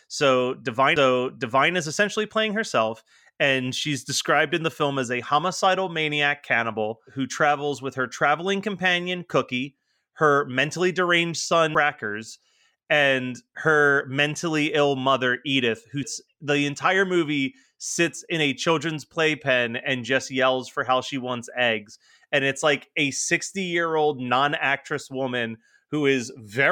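A CD skip occurs at 0.96 s, just before "is essentially playing herself". Two more follow: at 11.74 s, after "her mentally deranged", and at 16.03 s, before "the entire movie sits". Each time the laser jumps tracks. Playback mutes for a few milliseconds, ticks, and resumes elsewhere in the speech.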